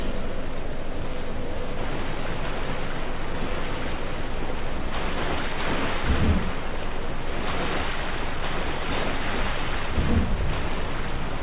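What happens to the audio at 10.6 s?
Nothing goes wrong at 10.6 s: the audio plays through intact, carrying only the steady narrowband character of the call path, with nothing above 4 kHz.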